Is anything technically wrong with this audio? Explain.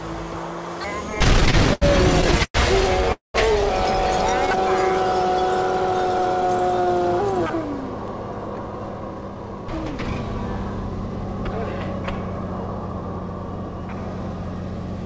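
Yes. There are repeated stalls (stutter) from 1.10 to 1.83 s and again from 2.21 to 2.56 s. Packets arrived late, so the jitter buffer kept emptying. Each stall stretches the last sound, up to 110 ms, and the audio drags.

A call audio freeze follows at 3.12 to 3.36 s. The sound holds, then drops to silence for about 150 ms. The likely cause is delayed packets, which inserted a gap of roughly 220 ms.

A jitter buffer speed-up runs from 8.72 to 10.24 s. The receiver trimmed short pitch-period pieces, about a fifth of a second in total. That section plays at 113% speed, hurried but at unchanged pitch. The G.722 call path leaves nothing above 8 kHz.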